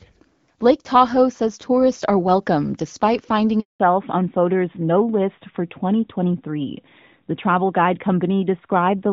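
Just after "are welcome despite finding", at 3.60 s, a handover gap silences the sound for 200 ms. The call switched networks and no speech frames arrived until the new link was up. The sound fades within tens of milliseconds into true silence, with none of the buzzy, repeated fill of concealed packet loss.

From 3.80 s to the end, fallback to narrowband takes over. Before the gap, the HD Voice wideband coding sounded clear with light damage. Now everything above 4 kHz is gone, leaving a duller, rougher sound. A low-rate wideband codec would also sound rough but keep its top band, while this loss of high frequencies begins exactly at the handover.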